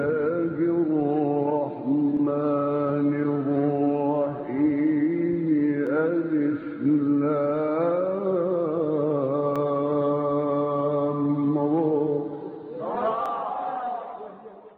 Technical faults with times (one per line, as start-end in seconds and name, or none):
2.17-13.26 clock drift buffer slips